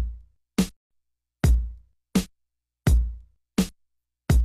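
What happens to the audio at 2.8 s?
Nothing goes wrong at 2.8 s; the audio plays through that moment intact, with no dropout, click or other fault.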